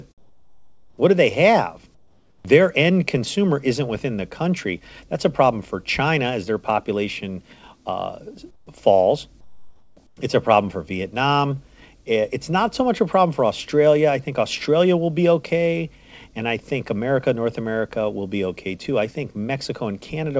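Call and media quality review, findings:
Comfort noise in place of the background at 0.18–0.98, 1.95–2.45, 8.51–8.67, 9.41–9.97 and 10.07–10.17 s: steady, featureless hiss about 6–11 dB quieter, not gated silence. Likely DTX at the sender with receiver-side CNG. Band ends near 8 kHz, fitting G.722.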